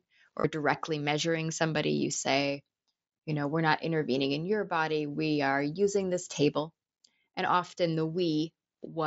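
At 0.40 to 0.44 s, just before "directly measuring somebody", concealed Bluetooth headset packet loss patches a 37.5 ms gap. The receiver repeats recent waveform. It sounds like a short buzzy tone, which fits about five lost frames. At 2.14 s, a 15 ms loss of two frames is patched the same way.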